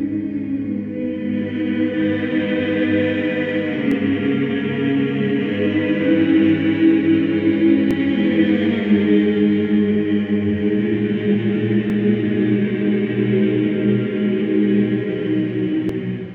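Tiny skips interrupt the sound at 3.91, 7.91, 11.9 and 15.89 s, evenly spaced about 4 s apart. Each drops only a sliver, well under a hundredth of a second, and the material on either side is butted together with no gap of silence. The regular 4 s spacing points to audio likely missing between chunks, where a piece is lost each time the recorder or processor closes one block and starts the next.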